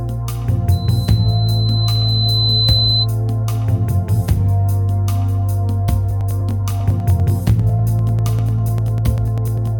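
From 0.71 s to 3.07 s there is loudspeaker feedback squeal: the microphone hears its own loudspeaker, and loop gain above one at 4 kHz lets that tone swell over roughly two seconds into a squeal standing about 5 dB above the sound.

From 6.11 s to 9.67 s, periodic USB or driver dropouts skip around a millisecond of audio every 0.099 s, about forty times in all. Something blocking the bus or driver at that fixed interval leaves a steady train of small ticks through the signal.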